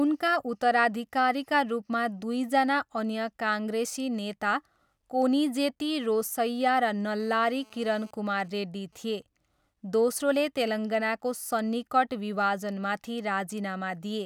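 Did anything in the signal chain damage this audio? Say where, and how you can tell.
Yes. GSM phone buzz runs from 7.2 to 8.11 s, right after "कोनिजेती रोसैया र". It is a hard, raspy 217 Hz buzz with dense harmonics, about 30 dB below the speech and unrelated to it. It enters in the analogue wiring: a nearby 2G phone on a call pulses its transmitter 217 times a second, and the audio circuit rectifies those pulses.

GSM signalling bursts follow from 8.14 to 9.23 s, heard as even ticks with a longer buzz twice a second, roughly 35 dB under the speech. They enter at the same analogue stage. The phone is still in the call, but with its user silent it sends only sparse groups of bursts, which the circuit rectifies.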